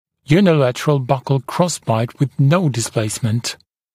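No technical faults can be heard anywhere in this clip.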